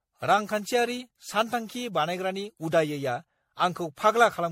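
Throughout the speech there is a swirly, smeared, hollow quality, with consonant attacks blurred and a watery texture that sounds worse than a single 64 kbit/s MP3 pass would produce. This points to generation loss, likely from the audio being decoded and re-encoded around ten times. Each pass requantises on a shifted frame grid, so noise and spectral holes accumulate. Nothing is present above 16.5 kHz, consistent with the MP3 lowpass.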